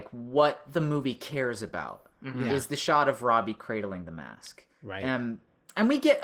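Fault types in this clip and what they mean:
Opus voice compression: throughout, the speech shows plainly audible codec damage from SILK linear prediction plus a CELT layer above 8 kHz, consistent with about 16 kbps.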